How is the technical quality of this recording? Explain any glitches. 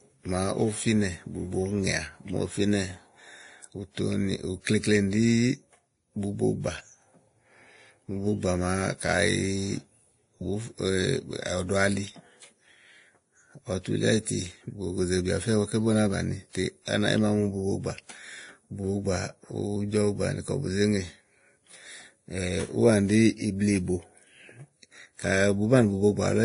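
The recording has one persistent fault: compression damage stacked from more than one encode, audible across the whole speech clip. Throughout, the sound shows transcoding between lossy codecs. It likely went through a low-rate Vorbis encode near 30 kbit/s and was then re-encoded to WMA around 64 kbit/s. The second encoder spends bits reproducing the first one's smearing and adds its own artefacts. Nothing remains above 10.6 kHz, leaving a dull top with the different codecs' artefacts heard together.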